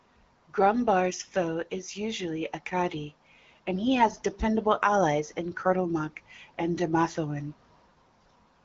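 No technical faults can be heard anywhere in the speech. It has the sound of the AMR wideband (HD Voice) codec at a mid-to-high rate, which fits roughly 15.85 kbit/s: the speech stays clear with only light coding texture, and nothing is heard above 7 kHz.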